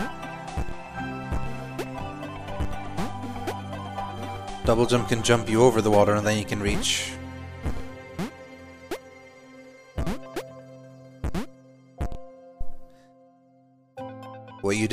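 No technical faults are audible.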